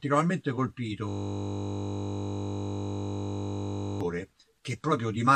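From 1.09 s to 4.01 s the audio locks into a system hang loop: the driver stalled while the hardware kept replaying one 20 ms ring buffer, well over a hundred times, giving a steady 50 Hz buzz. A waveform shows an identical repeating cycle; a spectrogram shows stacked harmonics every 50 Hz.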